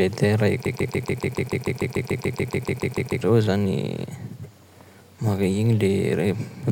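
From 0.66 s to 3.21 s the speech locks into a broken-record loop: a fragment about 0.14 s long plays 18 times in a row, each copy identical, giving a rapid mechanical stutter. The likely cause is a stalled player or stream re-sending its last buffered piece. Unlike an echo, nothing decays or overlaps, and unlike a dropout, sound never stops; the speech that belonged in those 2.5 seconds is simply missing.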